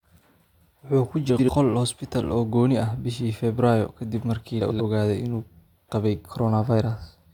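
Frames out of order at 1.29 to 1.49 s and 4.61 to 4.81 s: two adjacent blocks of about 93 ms each swapped, giving a garbled flutter, with visible discontinuities at three joins on the waveform.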